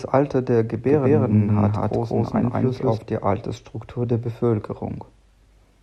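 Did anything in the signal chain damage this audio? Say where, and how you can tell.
Yes. From about 0.88 s to 2.98 s the speech is doubled: a second, full-band copy trails the original by roughly a fifth of a second at close to the same level, with no decay or room colour, and it switches on and off abruptly at both ends. This is a doubled audio track, most likely from the signal being captured twice, once through a slower monitoring or buffering path, and both copies mixed together.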